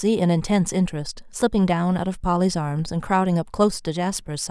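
No technical faults can be heard anywhere in the recording.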